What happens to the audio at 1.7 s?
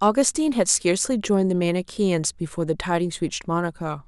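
Nothing goes wrong at 1.7 s; the speech runs through that moment intact, with no dropout, click or distortion.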